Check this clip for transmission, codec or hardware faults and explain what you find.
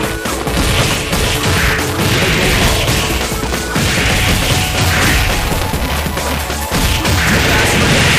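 One fault runs through the whole clip: buffer tearing. The writing program and the playback hardware have drifted out of step on the ring buffer, so within every period a small slice, roughly a twentieth, is audio left over from about one lap earlier, joined hard on both edges. That repeats at 375 Hz, which fits a 128-sample buffer, giving a constant robotic buzz that sounds only while signal is present. A spectrogram shows a comb of lines spaced 375 Hz apart, and the waveform shows regular discontinuities.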